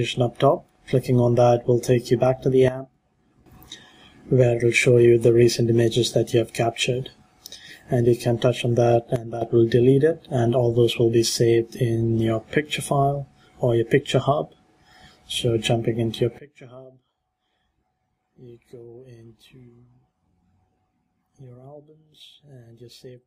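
At 2.68 s the level drops abruptly by about 12 dB and stays down until 3.46 s. The same sudden gain jump recurs from 9.16 to 9.42 s, again about 12 dB. At 16.38 s a deeper step of about 24 dB holds to the end. Each time, the sound and the background noise fall together instantly, with no fade. That points to a digital gain change likely applied between adjacent samples without a ramp.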